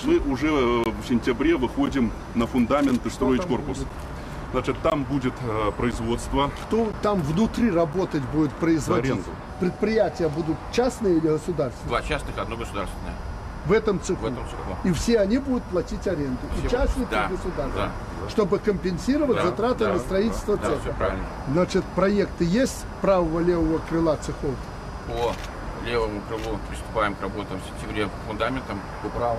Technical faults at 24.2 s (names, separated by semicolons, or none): none